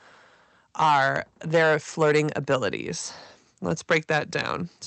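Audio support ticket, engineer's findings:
Hard clipping across the whole speech clip. Peaks cut flat. Crackle and harsh fuzz on louder syllables, start to end. Level driven about 10 dB past full scale. A small share of samples, around two percent, cut flat at the clip level. Flat tops add harmonics high up the spectrum; call path cuts off near 8 kHz.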